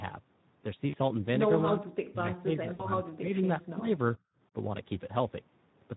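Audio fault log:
throughout: Speex codec. The speech sounds noisy and hoarse, which fits Speex at roughly 11 kbps. The excitation gets too few bits to rebuild the voice cleanly.
0.90–0.95 s and 2.73–2.89 s: VoIP packet loss concealed by the speech codec. About 40 ms and then 60 ms of audio went missing, which fits two and three lost frames. The decoder stretches the last sound into a buzzy tone or coloured noise that fades. The voice stays weak briefly after each gap.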